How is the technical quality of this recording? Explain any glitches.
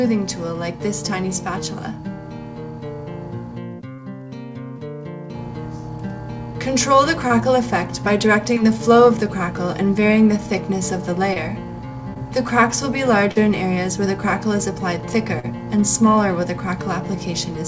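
The recording has seven brief glitches, all short concealed packet loss. They come at 3.96–4.00, 7.28–7.32, 8.54–8.58, 11.34–11.38, 12.14–12.18, 13.32–13.37 and 15.39–15.45 s. In the first five about 20 ms of audio went missing, and in the last two about 40 ms. Those packets never arrived in time, so the receiver patched each gap by extending the preceding sound, keeping its pitch or imitating its noise, then crossfading back. Each one is a quick smear or wobble, and a tiny sound can disappear. Unlike an unconcealed dropout, there's no hard silence or click edge. Throughout, the band stops near 8 kHz, which points to a wideband call codec such as G.722.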